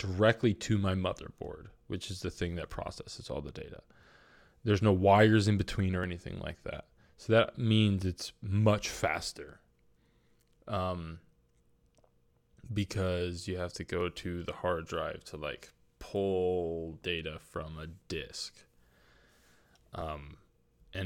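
Regular small ticks punctuate this speech clip every 2.0 s from 2.04 s, just after "to my motherboard", through 20.01 s, about ten in all. These are periodic USB or driver dropouts: something stalls the audio path at a fixed interval, and roughly 2 ms of sound is skipped each time.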